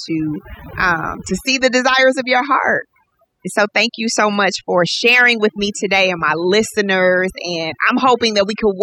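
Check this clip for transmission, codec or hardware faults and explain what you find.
One fault runs through the whole speech clip: overdone noise removal. The suppressor pulls individual frequency bands down or out whenever they sit near its noise estimate, so the background drops and breaks up into twinkling specks, and quieter parts of the voice vanish too. Unlike low-bitrate codec swirl, the damage follows the noise floor and gaps, not the loudness of the voice.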